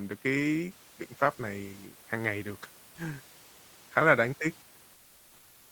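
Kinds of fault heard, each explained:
Comfort noise in place of the background: from 4.93 s to the end, the room background becomes a steady, featureless hiss about 2 dB quieter, likely Opus DTX filling a transmission pause; spectrograms show smooth, unvarying noise, waveforms a flat, even band.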